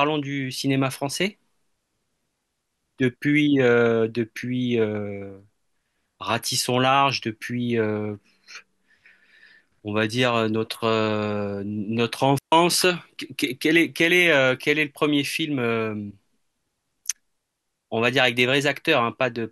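At 12.38 s the speech drops into a clean hole of near silence for about 140 ms, ending at 12.52 s. This is a digital wireless dropout: the receiver lost too much data and muted with a very fast fade. Unlike an analogue wireless dropout, no hiss or noise burst surrounds the gap.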